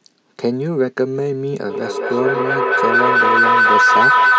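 A feedback howl takes hold in this speech clip from 1.7 s to the end at 4.38 s: a second device in the same room is picking up the loudspeaker output and sending it back round the call with net gain, so each pass comes back louder instead of decaying. The loop narrows onto a tone around 1.5 kHz, pulsing at roughly a fifth of a second, and climbs to about 7 dB above the speech.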